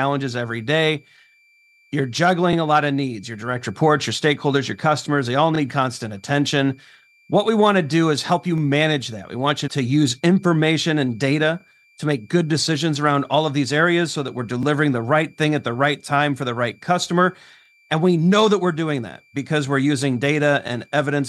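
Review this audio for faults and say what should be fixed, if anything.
A switching supply whistle runs through the whole clip, a thin high tone wandering between 2.32 and 2.39 kHz, sitting about 40 dB below the speech. The supply's regulator is cycling at an audible rate, and its pitch shifts slightly as the load on it changes. Mains hum sits at 50 or 60 Hz and its harmonics and never drifts, so a tone this high that slides in pitch points to the power supply. Powering the recording chain from a linear or well-filtered supply, or moving the regulator's switching frequency above the audible band, would remove it.

Overlapping chunks cause a short stutter at 2.53 s (just before "a lot of needs"), 5.55 s, 8.58 s, 11.60 s, 14.63 s (between "areas so that we're" and "the right thing at"), 17.66 s (just after "for the right customer") and 20.68 s. Each time about 25 ms of audio plays twice, because each 3-second block begins before the previous one ends. 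Sound is repeated rather than lost, which separates this from a dropout, and the regular spacing of about 3.03 s rules out random network glitches. Trimming or crossfading the overlap when the blocks are joined would fix it.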